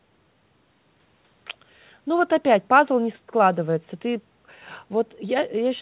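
Speech carried over a narrowband call path shows no technical faults, with the usual coding noise of a G.711-style codec and nothing above about 4 kHz, which is normal for this kind of call audio.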